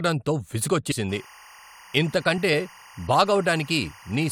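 At 0.90 s the speech jumps ahead by roughly 70 ms, and again at 2.53 s by roughly 20 ms. These are compressed frames skipped, consistent with about three 21.3 ms frames and then one being dropped. The waveform shows a sudden envelope discontinuity and the spectrogram a narrow vertical seam.

From 1.09 s to the end, timecode bleed adds a steady chirping warble about 25 dB below the speech. Linear timecode leaking in from an adjacent line flips between roughly 1 kHz and 2 kHz, and the rhythm fits 24 fps code. On a spectrogram it appears as two persistent horizontal bands with a fine periodic texture. In the waveform it is a low, constant square-edged floor.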